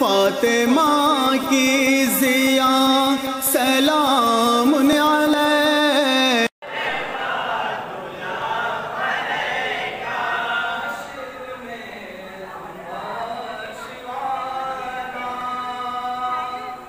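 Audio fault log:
1.44–15.41 s, clock drift buffer slips: a brief click every 1.75 s, about ten in all, likely from two clocks several hundred ppm apart dropping or repeating a few dozen samples. Spectrogram: thin broadband vertical lines. Waveform: discontinuities.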